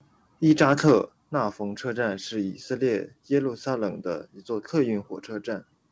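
From 0.5 to 0.93 s the loudest syllables crackle harshly, likely microphone overload, with peaks pushing about 3 dB past the converter's limit and a small share of samples flattened. At 1.02 s the voice and background drop abruptly by about 5 dB, the microphone volume stepped down, likely as the call software pulled the input gain back after that distortion. Through the call path, nothing comes through above 8 kHz.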